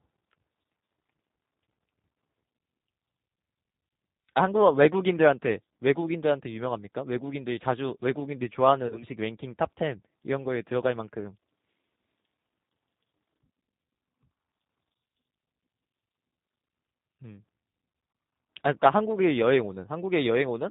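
Throughout, the speech sounds slightly rough and synthetic with nothing above 4 kHz, the plainly audible mark of the G.729 codec, which fits an 8 kbit/s stream rebuilt from a vocal tract filter and pulses. From 3.89 to 3.91 s a brief stretched, fading smear appears, then from 8.87 to 9.04 s short stretched, fading patches follow. This is VoIP packet loss concealed by the speech codec: the decoder extrapolated from its last pitch and filter over 20 ms, then over 40 ms lost in runs of up to 20 ms across about 80 ms.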